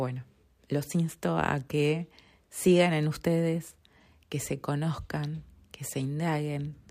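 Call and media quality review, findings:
Hiss and roughness riding on the speech, 1.99 to 4.36 s, louder on loud and bright passages, gone in pauses. Sample clock jitter in the converter: timing wander of a few microseconds, error roughly 30 dB below signal.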